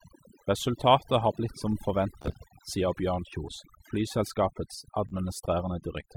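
From the start, overdone noise removal shapes the whole clip. The noise reduction was set too strong. It cuts individual frequency bands whenever they sit near its noise estimate. Quiet parts of the speech are cut with them. The background drops and breaks up into twinkling specks.

At 2.22 s, just after "har blitt som", a Bluetooth stutter begins and runs to 2.34 s. Packets arrived late or not at all. The receiver replayed its last short slice each time. About 56 ms of audio is missing, spread over 112 ms, with the longest gap 28 ms. That points to roughly four lost frames. It sounds like a brief machine-gun buzz. At 5.09 s a second stutter lasts 56 ms and replaces about 28 ms of audio. The sound resumes later, as if it had played on.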